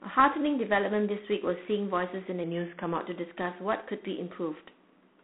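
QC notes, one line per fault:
Throughout, G.726 ADPCM: a harsh, rasping hiss rides along with the speech and swells with its level. That points to 24 kbit/s, with only 3 bits a sample for the prediction error. The band sits around 200 Hz to 3.5 kHz, with nothing past 3.9 kHz.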